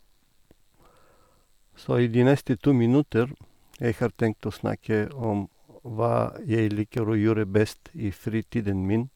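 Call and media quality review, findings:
Three single sharp clicks in the speech at 4.01 s, 5.24 s and 6.98 s, each a thin vertical line in the spectrum. Likely dropped samples: about 0.7 ms missing per event, so the waveform jumps to a later value and clicks without any audible loss of sound.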